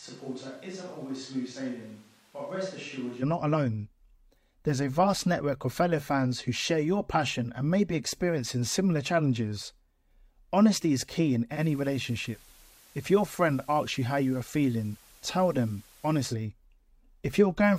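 From the first moment until 3.21 s, just before "not alone", the sound is roomy and hollow, thin in the bass, about 10 dB quieter, with room noise only some 25 dB down. This is likely a switch to a distant microphone. Unlike a gradual drift, it ends abruptly.

At 11.49 s, after "is key in", digital radio blending to analogue begins. A 108 ms cross-fade brings up FM hiss roughly 30 dB below the signal, nothing above about 15 kHz, and a level drop of about 1 dB. It returns at 16.35 s. The hiss and hard treble ceiling distinguish it from a distant microphone.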